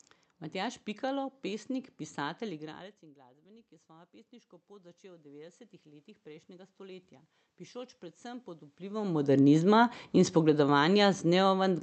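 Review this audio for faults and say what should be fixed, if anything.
From 1.71 s to 8.79 s there's automatic gain rising. The level at the mic dropped about 24 dB when the talker moved back around 2.5 s, so the AGC slowly cranked its gain up by about 17 dB, and the voice and room noise swell together. To prevent it, keep the talker at a steady distance, or slow the AGC and cap how far it's allowed to climb.

Then from 9.06 s to the end there's automatic gain falling. The talker came back in around 8.5 s while the gain was still high, so the sound hits loud and then sinks, room noise included, as the AGC backs off. A faster attack on the AGC's downward correction, or a limited gain range, would prevent that loud overshoot.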